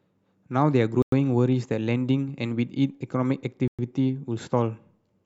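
At 1.02 s and 3.68 s the speech drops to silence for about 100 ms and 110 ms, then resumes: a Bluetooth stall, likely from delayed wireless packets, showing as blank vertical gaps in the waveform and spectrogram.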